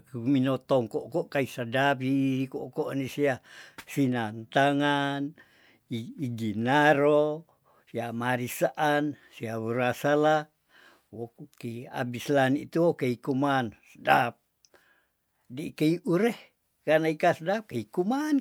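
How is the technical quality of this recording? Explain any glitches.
No glitches can be heard anywhere in this speech recording. There is no technical fault to explain.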